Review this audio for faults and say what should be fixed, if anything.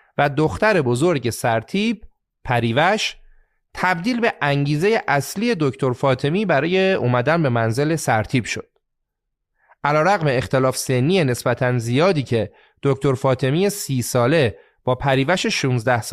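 Nothing here needs fixing, as the speech signal stays steady and intact across the whole recording with no audible disturbance at any point.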